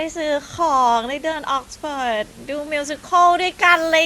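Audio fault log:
No faults detected.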